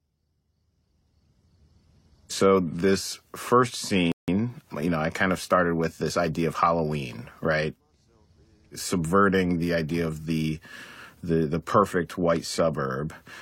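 A speech recording with a single rebuffering stall: at 4.12 s the sound cuts to silence and stays silent until 4.28 s, adding about 162 ms to the running time. The player ran short of downloaded audio and paused until more arrived. What separates this from a dropout or packet loss is that nothing is skipped. When the sound comes back, it picks up at exactly the point where it broke off.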